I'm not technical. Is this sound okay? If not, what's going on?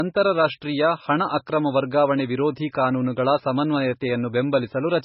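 No. The speech sounds dull and muffled from start to finish, as if heard through a wall, with nothing above about 5.6 kHz, so the crisp edges of sounds like s and t are missing. This is likely low-bitrate audio saved at a high bitrate: the recording was first squeezed into a very small file, which threw away that detail, then saved again as a large file. The bigger file can't bring back what was already lost.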